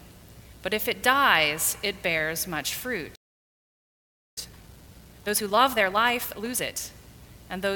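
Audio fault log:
3.15–4.38 s, playback stall: the sound stops mid-flow and the output stays silent for about 1.21 s before resuming. The cause is likely a player starved of data or a blocked playback thread. The gap is a long, clean hold, not a brief click-like dropout.
4.38–6.8 s, time-compressed catch-up: right after the stall the audio runs hurried at 1.5 times normal speed while keeping its pitch. Small pieces are cut out and cross-faded to shrink the backlog. A plain speed-up would raise the pitch instead.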